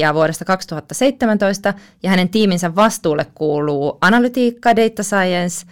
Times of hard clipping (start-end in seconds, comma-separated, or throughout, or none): 0.00-0.54, 1.02-1.66, 2.10-2.87, 4.03-4.25, 4.66-5.22